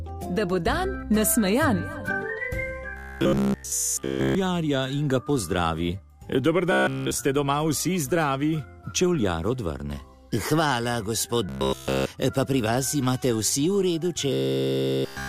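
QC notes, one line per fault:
2.97–4.36 s, 6.72–7.19 s, 11.49–12.06 s, 14.33–15.29 s: robotic sound from repeated short buffers. New audio likely stopped arriving in time, so playback kept looping a fragment about 15 ms long instead of moving forward, and nearly all of each stretch is repetition rather than fresh signal. That fixed loop imposes a steady 66.8 Hz buzz on the sound, turning it rigid and metallic while only its rough outline continues underneath.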